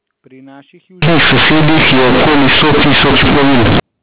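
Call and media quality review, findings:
Companded audio read as linear, 1.02–3.80 s: A-law bytes output as raw 8-bit samples, unexpanded; speech becomes loud, buzzing distortion, with pauses full of noise.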